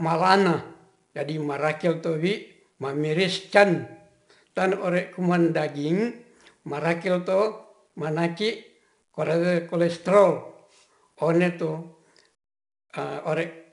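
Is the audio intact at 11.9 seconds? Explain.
No. At 11.9 seconds, as throughout the speech, 4-bit ADPCM compression is plainly audible. Each sample is coded as a coarse step from a prediction, leaving gritty hiss that tracks louder syllables. Nothing remains above 10.7 kHz, consistent with roughly 89 kbps.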